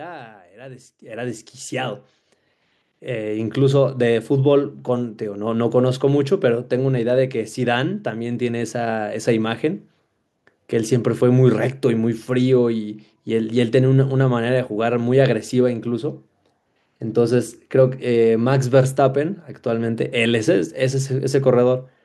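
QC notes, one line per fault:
1.02 s and 2.04 s, microphone volume stepped up: the device input gain jumps by about 10 dB, then about 3 dB more, lifting speech and background noise together. On the waveform the envelope widens abruptly at each point; the spectrogram brightens across all frequencies at once.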